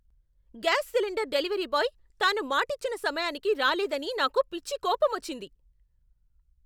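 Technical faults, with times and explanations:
No technical faults are audible.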